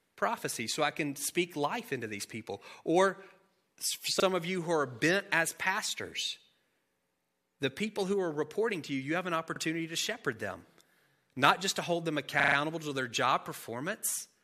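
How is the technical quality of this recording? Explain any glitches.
Three playback glitches interrupt the speech. All are repeated buffers. At 4.2 s, just before "of you who are", and at 9.56 s, between "you you have an" and "to shepherd them", a short slice plays twice. At 12.4 to 12.56 s, after "just to hold them" and before "to their job", it repeats several times. Each time new audio arrived late, so the device replayed its last block. The hard joins give a brief stutter, and the repeat length fits a 40 ms buffer. Nothing of the speech is skipped.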